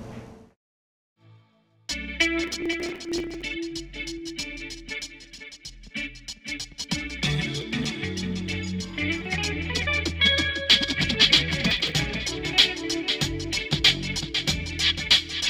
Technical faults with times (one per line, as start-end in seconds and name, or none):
2.44-3.42 processor overload crackle
7.56-7.85 processor overload crackle
11.71-11.95 processor overload crackle